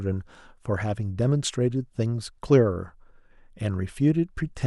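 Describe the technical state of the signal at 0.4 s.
At 0.4 s the speech signal is intact, with no audible fault at that moment.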